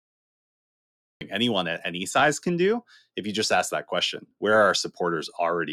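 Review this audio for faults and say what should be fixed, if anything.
A cut-off start: the clip holds digital silence from 0.0 to 1.21 s, then the speech enters abruptly mid-sound with no natural attack. Unlike a dropout, nothing precedes the gap; the capture simply began late. Start recording before the talker begins.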